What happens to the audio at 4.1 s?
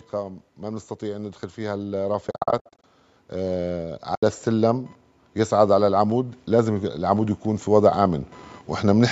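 An AAC frame loss with muting opens a hole from 4.15 to 4.23 s. About 80 ms of lost frames were zeroed, so the speech fades out and back in softly.

Automatic gain rising is under way here too. Between 0.11 and 4.89 s the gain climbs by about 9 dB, so voice and background swell together.

Computer activity noise also runs through this moment. It is a faint buzz with pulses around 1 kHz, far below the speech, and it follows the computer's load rather than the voice.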